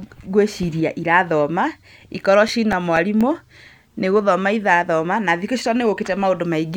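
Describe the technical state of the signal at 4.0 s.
At 4.0 s the speech signal is intact, with no audible fault at that moment.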